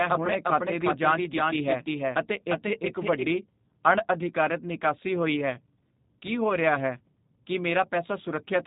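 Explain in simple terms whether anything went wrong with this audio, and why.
The speech has gone through the G.729 codec from start to finish. This phone-call format rebuilds speech from a rough model of the voice rather than storing the real sound. Nothing above about 3.8 kHz survives, so everything sounds muffled, plainly rough and synthetic.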